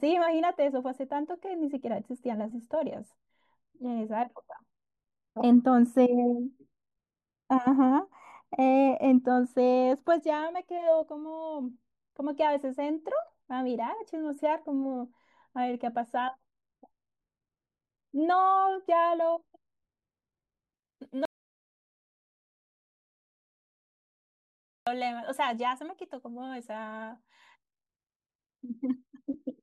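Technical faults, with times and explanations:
0.0–20.74 s: de-emphasis applied wrongly. The speech sounds dull and muffled. The treble falls away smoothly, reaching about 11 dB lower at 10 kHz than at 1 kHz. A treble cut meant to undo pre-emphasis was applied to audio that never had it, or was applied twice.
21.25–24.87 s: audio dropout to silence. The speech cuts off abruptly and returns about 3.6 s later. The gap is silent with no room tone. The input was likely lost while recording continued writing silence. Whatever was said then is gone.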